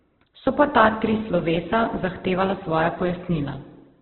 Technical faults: Opus compression

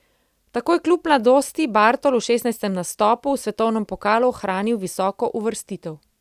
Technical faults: none

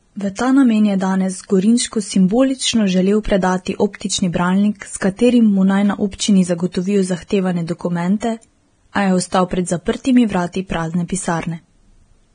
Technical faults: Vorbis compression

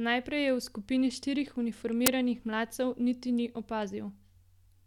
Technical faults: uninitialised buffer

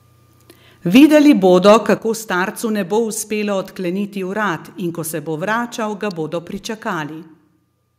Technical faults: microphone overload; microphone volume stepped down; electrical switching spike

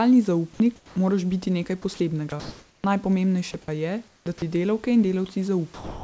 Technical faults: sound chopped by the voice detector; sound dropped by the voice detector

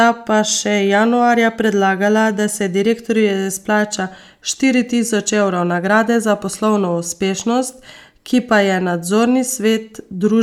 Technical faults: none

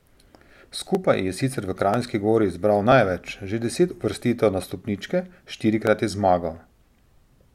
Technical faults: clock drift buffer slips

